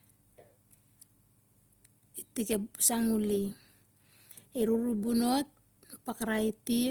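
Right through the speech there's a rough, grainy texture, likely Opus compression in music mode filling starved bands with noise, which fits about 24 kbps.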